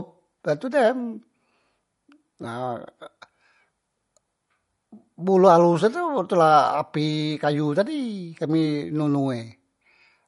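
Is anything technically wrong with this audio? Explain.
Yes. Throughout the clip the speech shows the signature of MP3 compression, likely at a bitrate near 48 kbps. Short of bits, the encoder drops everything above 11.2 kHz and zeroes weak frequency lines frame by frame, so the speech sounds dull, watery and swirly, with chirpy sibilants and smeared onsets.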